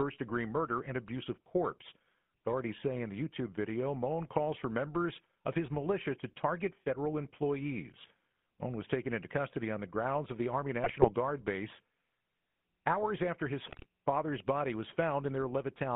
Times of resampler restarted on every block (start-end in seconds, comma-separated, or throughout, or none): none